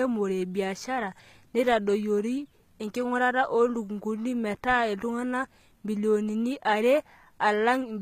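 Throughout the speech, the likely cause is HE-AAC compression at a bitrate in the region of 20 kbps. The encoder keeps only the lower spectrum and synthesises the treble by copying lower bands upward under a coarse envelope. The damage is plainly audible: the top end sounds artificial, its harmonics misaligned with the body of the sound, so s sounds come out gritty and lispy, and nothing remains above 14.8 kHz.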